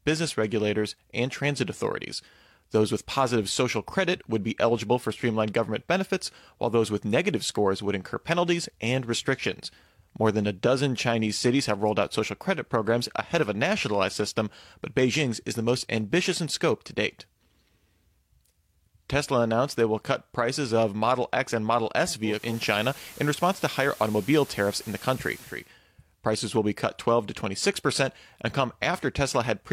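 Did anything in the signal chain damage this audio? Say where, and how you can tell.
Yes, at the broadcast reception stage: digital radio blending to analogue from 22.23 to 25.73 s. Over a 345 ms cross-fade, FM hiss rises roughly 20 dB under the speech and the level shifts about 1 dB, then blends back to digital.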